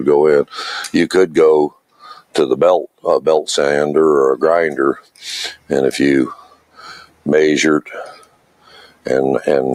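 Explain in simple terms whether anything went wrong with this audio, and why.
Yes. A noise suppressor applied to music or sounds was left running throughout. It treats steady tones and lingering tails as noise, so the level keeps swinging: sudden hits come through, but held parts sink. Unlike a plain dropout, the sound never fully vanishes.

The clearest moments are where the sound is cut by the noise suppressor: 1.69–2.35 s, 2.89–3.05 s, 4.96–5.23 s, 5.55–5.71 s, 6.35–7.27 s and 7.84–9.09 s. In each, sustained or fading sound is pushed down hard while attacks stay.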